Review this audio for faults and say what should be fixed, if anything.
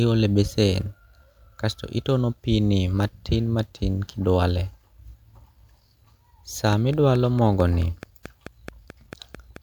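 Likely interference from nearby equipment or a struggling interface injects a pulse about 4.6 times a second, producing a train of clicks from 6.73 to 9.57 s: around fifteen evenly spaced, same-shaped pops that poke roughly 5 dB above the speech. Prevent it by isolating cables and interfaces from noisy gear.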